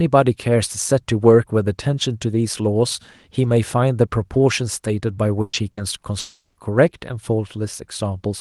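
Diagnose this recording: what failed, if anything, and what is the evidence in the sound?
The speech briefly freezes into a held buzz or fading hiss at 5.41–5.56 s and again at 5.71–5.80 s, then jumps ahead. This is a burst of packet loss at the network stage. Concealment stretched the last sound across 120 ms and 60 ms of missing audio.

From 6.19 to 6.58 s the sound smears into a decaying buzz, sinks into silence for its final tenth of a second, and resumes with material skipped. A long network dropout is the likely cause, with concealment fading out before packets arrived again.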